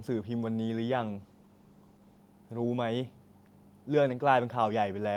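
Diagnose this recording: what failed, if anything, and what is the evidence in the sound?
A call bitrate drop hits the codec stage, triggered by a falling network bandwidth estimate. From 0.93 s to 2.29 s the speech turns coarser, worst for about 1.25 s. That fits Opus stepping from 40 kbps down to 16 kbps, coding with fewer bits before recovering.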